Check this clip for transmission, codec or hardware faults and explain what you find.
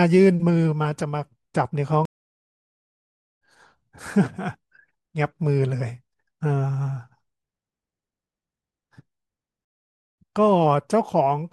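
Two stream reconnects break this speech. From 2.05 to 3.41 s the sound drops out for 1.36 s and comes back about a second further on; from 9.65 to 10.17 s a 0.53 s gap skips roughly half a second. Each time the connection failed, the player went quiet, reconnected, and restarted decoding at the live stream's current position.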